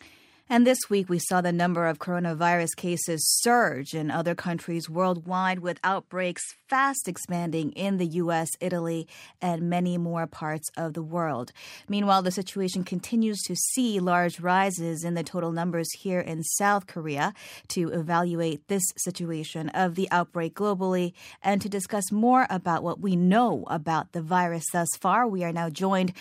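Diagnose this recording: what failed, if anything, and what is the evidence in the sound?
The capture stage likely switched to a poorer input device from 5.24 to 6.96 s, after "surge in other countries". With no gap at the switch, the speech loses everything above 11.4 kHz, drops about 5 dB and gains a faint new noise floor until "expanding in the".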